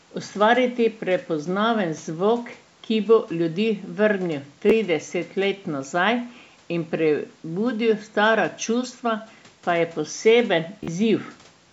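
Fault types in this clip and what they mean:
Bluetooth stutter: at 4.70 s and from 10.84 to 10.88 s, packets went missing, so the receiver replayed its last buffer as a brief repeated-slice stutter. The speech then jumps ahead, skipping 13 ms and then 40 ms, which suggests one lost packet, then three.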